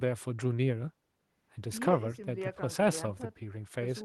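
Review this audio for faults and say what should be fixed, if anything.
Nothing here needs fixing; the speech comes through without any technical faults worth flagging.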